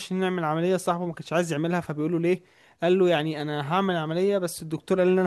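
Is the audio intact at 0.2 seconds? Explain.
Yes, the speech at 0.2 seconds is intact, with no audible fault at that moment.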